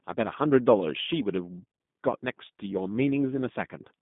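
G.729 codec throughout: speech is band-limited to 150 Hz–3.6 kHz and sounds rough and synthetic, fitting an 8 kbit/s rebuild from few pulses.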